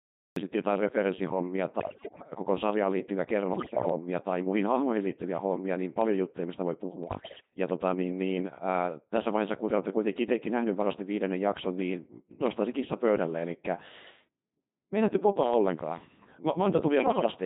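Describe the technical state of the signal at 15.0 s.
At 15.0 s the speech is still passing through the Codec 2 vocoder, as it does for the whole clip. The waveform is not carried at all. Only pitch, voicing, energy and a rough spectral envelope get through, and the decoder rebuilds the voice from a bank of sine waves. The damage is heavy. The voice sounds robotic and buzzy, with a smeared, synthetic tone. The coarseness fits a very low bitrate of around 2.4 kbit/s.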